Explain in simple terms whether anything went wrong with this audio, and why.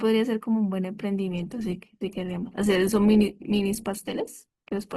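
From about 1.31 s to the end, the adaptive stream drops to a lower bitrate, probably from a slower connection, so the speech suddenly sounds grainier, with no gap.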